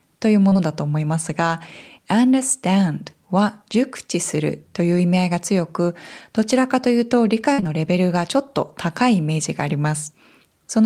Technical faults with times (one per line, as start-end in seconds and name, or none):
0.49-0.57 short concealed packet loss
7.53-7.60 burst of packet loss
7.60-7.67 short concealed packet loss